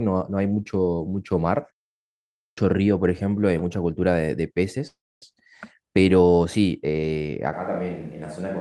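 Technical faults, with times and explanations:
2.16–2.58 s, clipped start after a pause: After a silence of about 0.52 s, the sound bursts in abruptly with its opening missing, about 0.42 s swallowed while the output device wakes from its idle state and resynchronises. The waveform jumps from silence straight into the sound with no onset ramp. On a spectrogram, the energy begins as a hard vertical edge, and the first sounds are absent.
4.87–5.23 s, call audio freeze: The sound stalls and the final fragment is stretched into a fading buzz or hiss for about 0.34 s. Roughly 0.26 s of that is near-silent before the audio resumes exactly where it stopped. This is likely a jitter buffer running dry as packets arrived late. Nothing is lost, but everything afterwards runs about 0.34 s later. A spectrogram shows a smeared, repeating band that decays into blankness, and the waveform shows a dwindling, periodic tail.
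7.54 s to the end, switch to a distant microphone: The sound abruptly turns hollow and roomy, with thinner bass and a level about 5 dB lower. This is likely because the recording fell back to a microphone further away. Room noise becomes noticeable, sitting only about 30 dB below the speech. On a spectrogram, low frequencies thin out and a reverberant haze trails each syllable. The waveform envelope drops in height.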